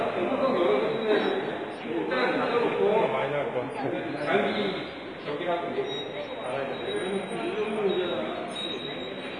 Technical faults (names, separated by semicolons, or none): WMA compression